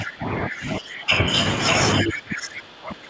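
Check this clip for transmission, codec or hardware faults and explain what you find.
Two things stand out: a doubled track throughout, and the talker getting pushed down twice in double talk. The 8 kHz ceiling from the G.722 call path is just how it's coded.

The doubled audio track runs the whole clip. A second copy of the speech trails about 0.7 s behind, only about 5 dB quieter, dry and full-band, so everything echoes back. It's likely a second capture path or an out-of-step edit.

Speech suppressed in double talk hits from 0.00 to 1.25 s, dipping about 15 dB, and again from 2.02 s to the end, dropping about 25 dB. The voice dips, likely because the echo canceller couldn't tell the talker from loudspeaker echo and ducked both.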